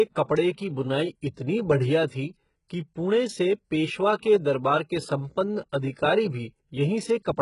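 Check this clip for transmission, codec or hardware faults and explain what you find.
Two faults: a codec problem running through the whole speech clip and one brief smeared attack near the start.

Throughout, the sound has heavy coding damage, likely from HE-AAC compression at a very low bitrate, around 12 kbps. Treble is rebuilt from lower bands and nothing reaches above 11.1 kHz, so sibilants come out gritty and lispy.

At 0.54 to 0.58 s there's pre-echo: about 39 ms of hiss leading into an attack, because block-spread quantisation noise lands ahead of the transient and softens it.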